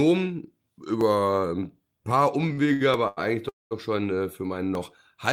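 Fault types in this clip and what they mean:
Dropped samples: Four isolated sharp clicks, at 1.01, 2.11, 2.94 and 4.75 s, each likely caused by a tiny run of samples, well under a millisecond, vanishing from the stream so the waveform leaps straight to a later value. Far too brief to take away any of the speech, each one shows as a single vertical step in the waveform and a thin full-height line across the spectrogram.
Repeated stalls (stutter): Between 2.41 and 3.19 s the speech halts five times. Packets were arriving too slowly, so the playback buffer kept draining, and each time the receiver stretched the last sound until delivery caught up. About 215 ms is filled this way, roughly 28 percent of that stretch, with the longest hold about 90 ms and nothing actually lost. The spectrogram shows repeated smeared, flattened patches between normal-looking speech.
Call audio freeze: From 3.49 to 3.73 s the speech stops dead for about 220 ms and then resumes exactly where it left off, so nothing is missing but a gap has been inserted and everything after it runs late. 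This points to a delivery hold-up that emptied the buffer. A brief continuation of the last sound decays into about 190 ms of silence, seen as a blank band in the spectrogram and a flat line in the waveform.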